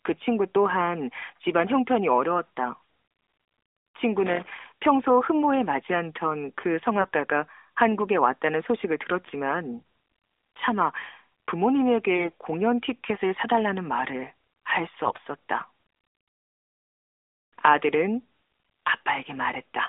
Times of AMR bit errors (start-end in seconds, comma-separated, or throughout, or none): 7.00-7.14, 12.16-12.32, 15.04-15.20, 18.46-18.68